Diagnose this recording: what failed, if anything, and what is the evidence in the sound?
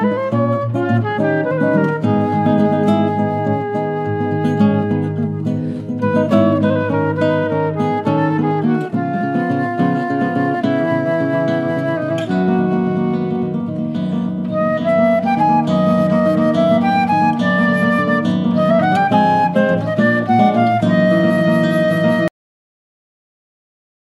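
The sound stops abruptly at 22.28 s, mid-event, with no fade or natural decay, and the remaining couple of seconds are flat digital silence. This is a cut-off end, a failure at the buffer-to-storage stage: the final buffers of audio were never written to the file, so playback runs out of real samples partway through a sound and the container simply holds nothing where the rest should be.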